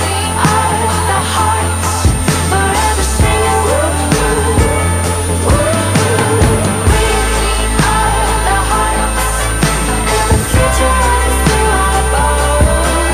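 From start to finish, a switching supply whistle sits under the sound: a thin, high tone wandering between about 8.8 and 9.5 kHz, only around 10 dB below the programme. A nearby switch-mode power supply is running at an audible switching rate, and its pitch shifts as the load changes. On a spectrogram it shows as a narrow, slightly drifting line near 9 kHz across the whole clip.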